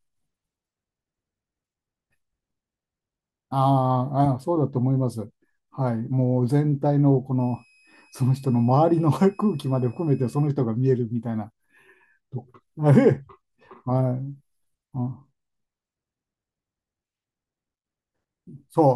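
From 7.40 s to 10.47 s a switching supply whistle sits under the speech: a faint, thin high tone, wandering slightly between about 2.53 and 2.55 kHz. A switching power supply has fallen into an audible burst mode or is beating against another supply. At roughly 40 dB below the speech it barely changes the waveform. On a spectrogram it shows as a narrow horizontal line near 2.5 kHz that wavers only slightly.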